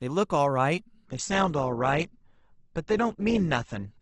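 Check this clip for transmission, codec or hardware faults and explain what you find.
One fault is present: the adaptive stream drops to a lower bitrate at 1.06 s and stays there to the end at 4.01 s. The connection evidently slowed, so the player switched to a much leaner encoding, which fits a step from about 64 kbit/s down to about 12 kbit/s. From that moment the speech loses everything above 8.1 kHz and takes on a thinner texture with stronger codec artefacts. The change is abrupt, with no gap in the audio.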